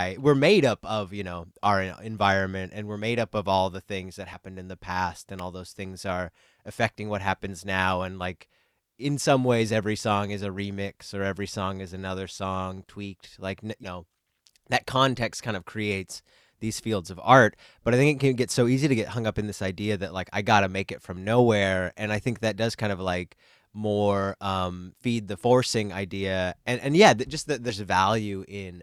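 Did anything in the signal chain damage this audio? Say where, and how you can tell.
Yes. At the codec or storage stage, compressed frames are skipped at 4.33 to 4.37 s, 13.83 to 13.86 s and 27.69 to 27.72 s. The speech jumps ahead by roughly 40 ms, 70 ms and 70 ms, a few 20 ms frames each.

In the analogue wiring, a sharp snap or tight cluster of clicks sits on top of the speech at 5.39 s. It is brief and unrelated to the sound around it. That points to an electrical switching spike, likely from a nearby switch or discharge coupling into the line.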